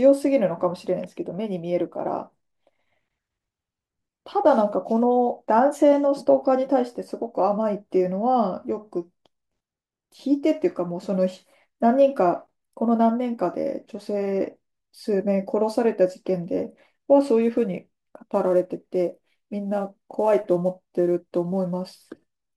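From 17.42 s, sample clock jitter, a few-microsecond timing wobble, adds roughness that, unlike steady hiss, swells on loud, bright speech and vanishes in pauses.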